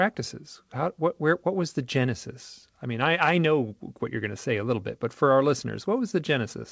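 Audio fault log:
Nothing to log here, since the speech just comes through a call path working as it should, with the sound stopping at about 8 kHz the way a wideband call codec would leave it.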